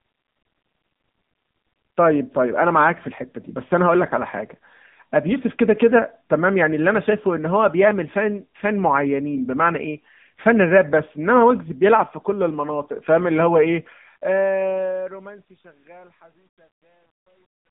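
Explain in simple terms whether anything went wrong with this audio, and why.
Yes, two things went wrong. Throughout the speech, the voice sounds thin, boxy and buzzy, like a phone call, with nothing above about 3.8 kHz. That is the AMR narrowband mobile codec, which rebuilds the voice from a simple model and is plainly audible at this quality.

From 13.77 s to the end, the fade-out turns gritty, worst from 15.18 s onward. That is truncation distortion on a fade. The volume was lowered using too few steps, around 10 bits, so very quiet sound becomes coarse.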